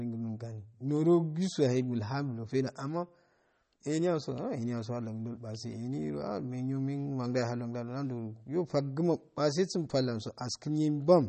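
MP3 compression damage runs from start to finish of the speech and is plainly audible. The likely cause is a low-bitrate encode that left too few bits for the full spectrum; the sound fits about 32 kbps. The encoder cut the treble entirely, so nothing is heard above 8.4 kHz, and weak frequency lines drop in and out between frames, giving a watery, swirling texture with metallic chirps on s sounds and smeared consonant attacks.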